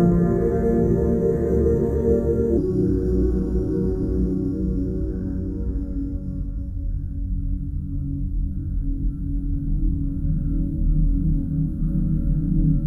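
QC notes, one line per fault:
2.57 s to the end, section at the wrong speed. From this point the audio plays at 0.809 times its original speed. Everything slows and drops in pitch together, by about four semitones. The change is sudden, not a gradual drift. Speed and pitch move as one because the same samples are simply read out more slowly. The likely cause is an editor or player fitting this section to the wrong clock.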